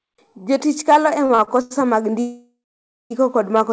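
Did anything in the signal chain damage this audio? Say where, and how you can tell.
Yes, there's damage at the network and jitter-buffer stage of the call path. Between 1.26 and 1.73 s you get repeated stalls (stutter): four short gaps, the longest 93 ms, adding up to 187 ms of filler, so roughly 40% of that stretch is concealment rather than real audio. Packets were arriving late, the buffer kept running dry, and the receiver stretched the last bit of sound each time. Nothing's lost, it just drags and hiccups.

The bigger one is a call audio freeze from 2.21 to 3.12 s. The sound hangs and decays, then sits silent for about 550 ms before picking up exactly where it left off, so roughly 0.9 s has been inserted and nothing dropped. That's likely packets held up in transit, emptying the jitter buffer while the receiver bridged the wait. The G.722 coding band-limits to 8 kHz, so nothing up top, but that's expected.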